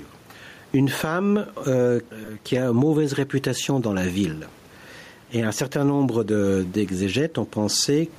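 Gain pumping runs throughout: the level swings by around 10 dB as a fast limiter, likely fed by excessive microphone gain, ducks each loud syllable.

Lost LE Audio frames at 2.25 to 2.29 s, between "une femme euh" and "qui a mauvaise réputation", and again at 5.74 s: the decoder repeats the last spectrum with scrambled phase, smearing the sound into a brief noisy blur. The first gap is about 30 ms, four frames at 7.5 ms; the second is a single frame.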